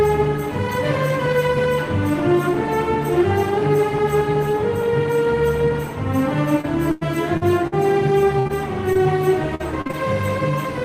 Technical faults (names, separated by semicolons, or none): repeated packet loss (robotic sound); burst of packet loss; short concealed packet loss